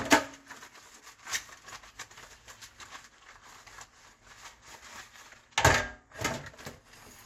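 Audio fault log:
No faults were found in this recording of sounds. There is nothing to log for any part of it.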